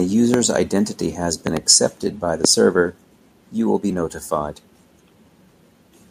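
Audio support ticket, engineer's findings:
Loud pop, 0.34–0.36 s, 1.47–1.59 s (double), 2.45–2.47 s. Sharp pulses about 15 to 20 dB above the speech, which continues underneath. Likely voltage steps from a connector, switch, static or driver glitch, shaped downstream.

Microphone overload, 1.70–1.75 s. Harsh crackle on the loudest peak, about 2 dB over full scale, with a small fraction of samples flat-topped. Likely input gain set too high, driving peaks into the converter ceiling.

Microphone volume stepped down, 2.82 s. Speech and background drop together by about 2 dB in one step, shortly after the clipped peak. Likely call software detecting overload and cutting device input gain.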